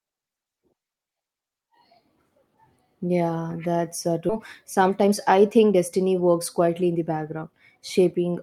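It's a speech clip with two related problems. Right after "that's uh", at 4.29 to 4.31 s, there's a skip ahead: about a second of audio is simply gone and the two sides are butted together with no gap. Then from 4.39 to 8.13 s you get jitter buffer speed-up, with talk running about 110% fast at normal pitch as the receiver trims tiny pitch-period slices, roughly 0.4 s in all, to bring the backed-up delay down.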